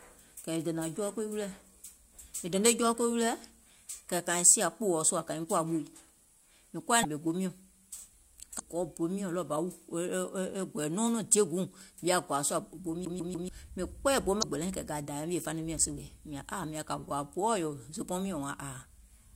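A speech recording carrying two kinds of fault. Damaged data in a compressed stream produces three brief glitches, each about 50 ms long: at 7.00 to 7.05 s, at 8.56 to 8.61 s just before "gɔɔ bo", and at 14.39 to 14.44 s between "mìŋ kpɛɛyɛ̀ bo" and "gbɛlɛiŋ kɛ̀ kȧ dȧȧè". Corrupted bytes make the decoder misread frames and resynchronise on a later header, so each is a one-off garbled blip, never a repetition. The CD stuck on one turn fault, from 13.05 to 13.49 s after "sùȧ bo" and before "mìŋ kpɛɛyɛ̀ bo", is different: the same 144 ms slice plays three times with a tiny mute at each jump, giving an even mechanical stutter of identical material rather than a single burst of noise.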